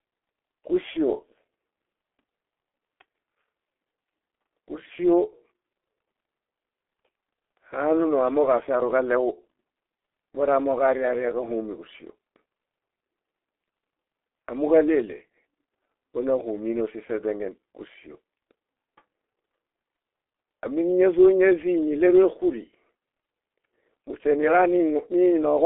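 From start to finish the speech carries G.723.1 codec damage: muffled, hoarse sound with smeared consonants and nothing above about 3.7 kHz. Its 30 ms frames and roughly 6.3 kbit/s rate make it coarser than ordinary narrowband telephone filtering.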